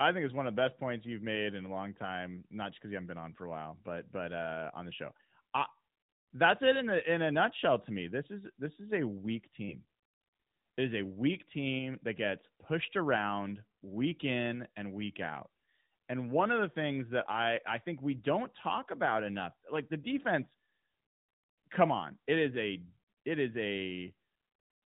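Nothing stood out as a technical fault on listening to this speech clip.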